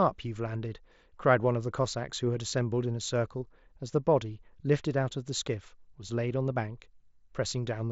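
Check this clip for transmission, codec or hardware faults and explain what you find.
No transmission, codec or hardware fault shows up in this speech clip. It has the sound of a Bluetooth mSBC headset link working as designed, with the speech limited to about 8 kHz and a light grainy texture on the louder passages.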